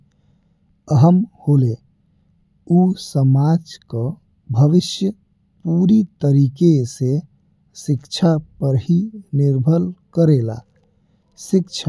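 No technical faults can be heard at any point in the speech.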